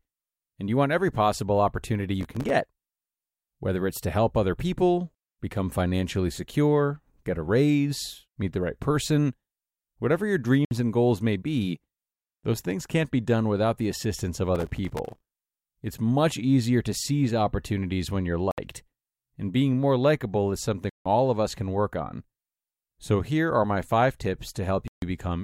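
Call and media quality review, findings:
Gritty crackle at 2.21–2.50 s, after "want every possible opportunity", and 14.55–15.40 s. Processor overload crackle: many missed deadlines in a row, each leaving a short hard-edged silence, consistent with buffers of around 1.5 ms.

Clean dropouts to silence: 10.65 s (61 ms, between "whatever your" and "and goals may be"), 18.51 s (66 ms, after "seize opportunities when you're"), 20.90 s (161 ms), 24.88 s (144 ms). Likely Bluetooth stall: headphone buffer ran dry awaiting resent packets.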